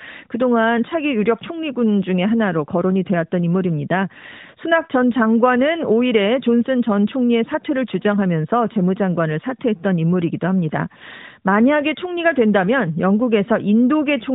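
Nothing's technically wrong with this speech clip: it comes across the way an ordinary phone call through the AMR narrowband mobile codec would, with no faults to point to anywhere.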